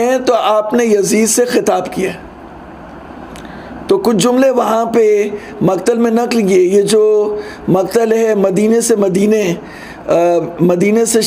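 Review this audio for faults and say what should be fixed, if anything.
Nothing in this audio needs fixing. No faults can be heard anywhere in it.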